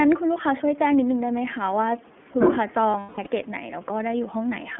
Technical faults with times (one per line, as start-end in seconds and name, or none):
0.00-4.80 iLBC codec
2.91-3.28 lost iLBC frames